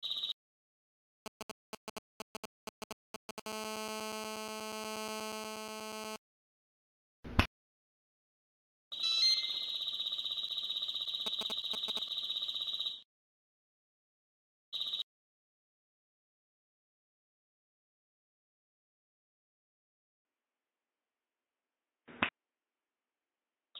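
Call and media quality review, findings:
GSM signalling bursts, 1.26–3.40 s and 11.26–11.99 s: galloping dit-dit-dit of short 217 Hz buzzes, around 5 dB below signal. A nearby 2G handset's sparse radio bursts are rectified by the audio circuit. Spectrogram: grouped short vertical stacks of 217 Hz harmonics.

GSM phone buzz, 3.46–6.16 s: continuous raspy 217 Hz buzz, about 6 dB below signal, from a handset in an active call whose 217-per-second transmit bursts are rectified. Spectrogram: steady horizontal comb at 217 Hz spacing. Waveform: regular pulse train.

Band narrowing from 20.23 s to end, after a 20 ms gap: nothing above 3.8 kHz, level down roughly 5 dB, new noise floor around 50 dB below signal. Likely input switched to a poorer device. Spectrogram: abrupt hard ceiling. Waveform: brief dropout, then a lower envelope.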